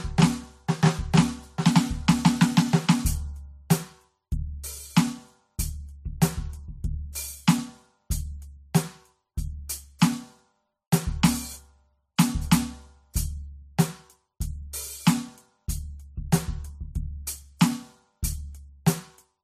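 Throughout the music, transcoding between lossy codecs likely explains the degraded sound: nothing remains above 14.1 kHz, and low-bitrate AAC and MP3 artefacts stack audibly.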